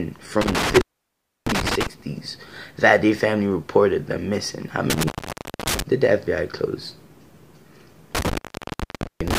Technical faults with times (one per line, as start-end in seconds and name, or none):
0.41-1.87 intermittent contact
4.90-5.82 intermittent contact
8.15-9.39 intermittent contact